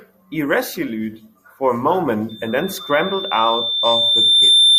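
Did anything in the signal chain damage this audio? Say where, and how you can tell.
Yes, loudspeaker feedback squeal in the analogue mic-to-speaker loop. From 2.29 s a steady 3.6 kHz tone swells over roughly two seconds until it sits around 10 dB above the speech and runs to the end. The loop's gain tops unity there, so it feeds itself.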